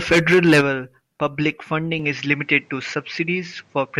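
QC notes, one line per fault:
1.99–4.00 s, input switched to a poorer device: from 1.99 s the speech loses everything above 8.5 kHz and turns duller, with a new noise floor roughly 40 dB down and no gap or level jump. This likely comes from recording moving to a narrower-band microphone.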